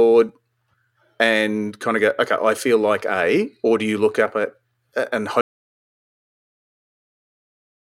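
The recorder's input was likely lost to a disconnected device, failed link or stray mute while recording continued, causing an audio dropout to silence in this speech. At 5.41 s the sound cuts off mid-flow, and the final 2.5 s are silent, with no room tone.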